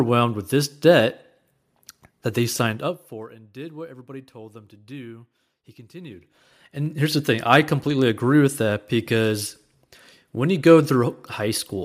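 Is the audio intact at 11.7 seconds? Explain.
Yes, at 11.7 seconds the speech is intact, with no fault to be heard at that moment.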